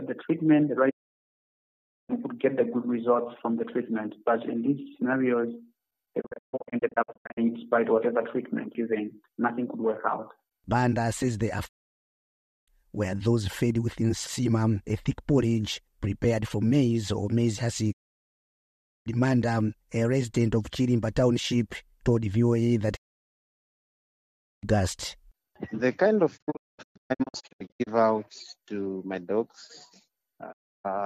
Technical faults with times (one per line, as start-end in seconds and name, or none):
0.89-2.11 digital broadcast dropout
6.20-7.39 digital broadcast dropout
11.67-12.69 digital broadcast dropout
17.91-19.08 digital broadcast dropout
22.95-24.65 digital broadcast dropout
26.36-27.89 digital broadcast dropout
30.51-30.86 digital broadcast dropout